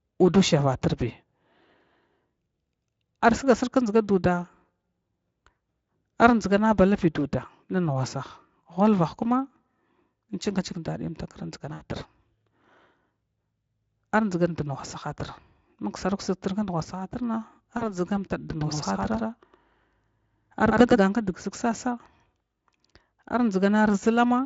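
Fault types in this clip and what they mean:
VoIP packet loss concealment: When packets drop out, the speech decoder fills the gap by repeating its last pitch and spectral shape at steadily falling gain, so the sound smears into a fading buzz. This happens at 11.73 to 11.82 s, a gap of about 80 ms that fits four 20 ms frames. It happens again at 17.77 to 17.97 s, where about 40 ms is lost but the weakened, distorted sound continues after packets resume.
Doubled audio track: From 18.49 to 20.99 s a second full-band copy of the speech plays about a tenth of a second behind the original, at roughly the same level. It gives a hard, slapback-like repeat with no reverberant tail or room colouring. It starts and stops abruptly at those times. The likely cause is the same signal being picked up a second time through a slower path, with the two copies summed together over the light Speex coding.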